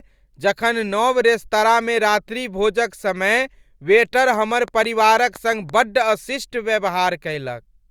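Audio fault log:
4.34–5.70 s: train of clicks. About ten sharp ticks arrive at a steady 5.9 per second, each much the same shape. They peak near the level of the speech itself. Interference from nearby equipment is the likely cause.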